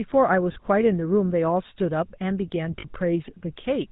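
Across the whole clip the GSM full-rate codec gives the speech a buzzy, gravelly roughness with nothing above 4 kHz. The coarse pulse excitation marks it apart from plain band-limiting. Lost GSM frames appear at 0.52 to 0.56 s and 2.80 to 2.85 s. Each is a brief metallic ring where the last good frame was repeated, not a silent dropout.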